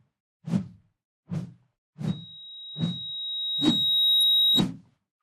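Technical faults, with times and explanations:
2.07–4.65 s, loudspeaker feedback squeal: a 3.8 kHz tone swells over about 2 s to roughly 5 dB above the sound as the microphone-loudspeaker loop gain exceeds one.
4.21–4.23 s, DAB burbling: a brief burble, which fits a few corrupted audio frames where bit errors from weak reception slipped past error correction into the audio data.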